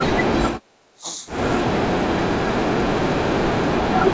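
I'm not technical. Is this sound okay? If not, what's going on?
No, not quite. From 0.61 to 0.66 s the room sound briefly dips. That's background gated by the echo canceller, which turns the microphone down while the other end's loudspeaker is playing.

The speech also drops away at 0.94 to 1.06 s, 2.28 to 2.93 s and 3.31 to 4.02 s, the last two quite deeply. That's speech suppressed in double talk, likely because both sides were talking at once.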